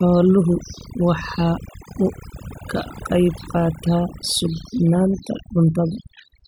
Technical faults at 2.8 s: overdone noise removal

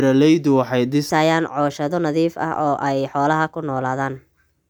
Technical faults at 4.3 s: section at the wrong speed

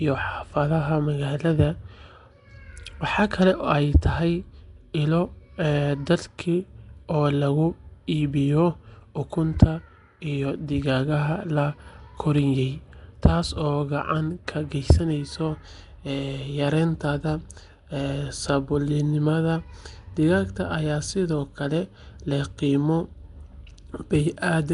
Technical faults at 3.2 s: Nellymoser compression

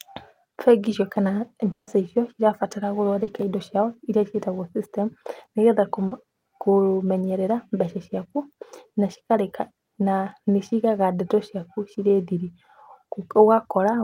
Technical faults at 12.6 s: none

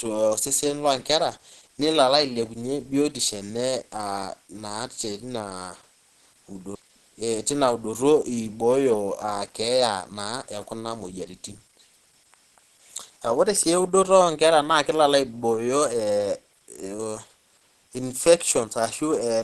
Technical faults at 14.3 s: Opus compression

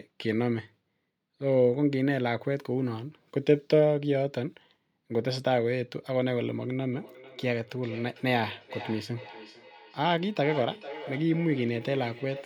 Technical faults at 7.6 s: feedback echo between two devices

